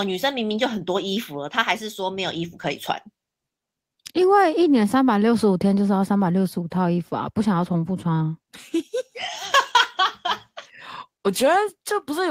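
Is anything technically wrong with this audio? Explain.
No technical faults are present.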